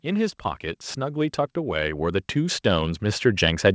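Automatic gain rising runs from 0.05 s to the end at 3.75 s. The gain control judged the input too quiet and kept raising its gain, so the speech and the background noise swell together, with the G.722 call path's content stopping at 8 kHz.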